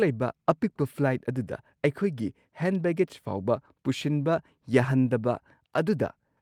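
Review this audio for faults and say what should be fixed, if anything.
Nothing stood out on listening to this speech recording, so there is nothing to fix.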